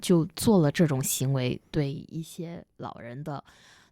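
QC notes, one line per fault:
1.54–2.48 s, zipper noise: the level falls by roughly 10 dB in coarse unsmoothed steps, around fifty per second, and each jump puts a small click into the waveform, so a fine ticking, zipping texture rides on the sound throughout the fade.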